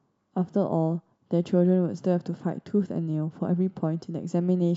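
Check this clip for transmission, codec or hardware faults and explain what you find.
Nothing in the speech points to a transmission, codec or hardware fault.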